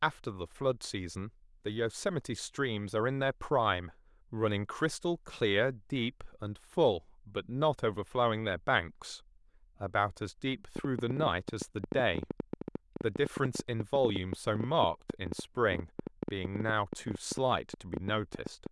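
A train of clicks runs from 10.76 s to 18.67 s in this speech recording, about 8.7 per second at an uneven pace, some seventy in all. Each click has much the same sharp shape and stands well above the speech, roughly 15 dB louder, so the ticking is heard over the talking and through the pauses alike. The repeated similar pulses most likely come from interference from nearby equipment or a faulty connection or power supply.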